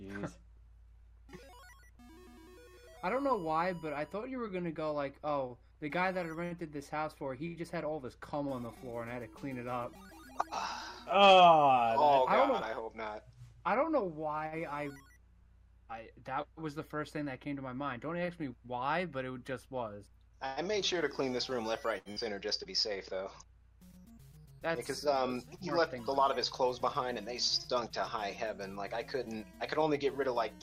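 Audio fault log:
18.25 s and 21.98 to 22.09 s, short stall from a late packet: a packet turned up late, the jitter buffer ran dry, and the receiver just held the last sound for about 23 ms and then 74 ms before carrying on from the same spot, so you hear a brief drawn-out sound with a slight buzz or dip but nothing's actually lost.
22.12 to 22.19 s, burst of packet loss: right after that second stall, about 60 ms of audio never made it in time, so the receiver stretched the last sound for around 48 ms, letting it fade, then jumped ahead past the missing bit.
29.17 to 29.36 s, jitter buffer speed-up: too much audio had piled up in the buffer, so the receiver trimmed out small pitch-period chunks, roughly 40 ms in all, and playback runs about 115% speed at unchanged pitch, sounding hurried.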